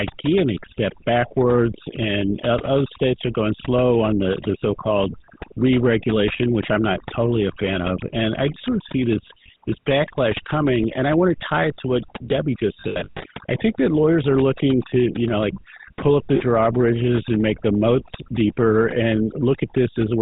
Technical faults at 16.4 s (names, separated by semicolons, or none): overdone noise removal; GSM full-rate codec; lost GSM frames